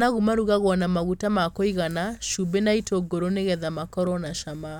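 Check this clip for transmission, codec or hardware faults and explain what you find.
Nothing here points to a transmission, codec or hardware problem; the speech comes across steady and intact all the way through.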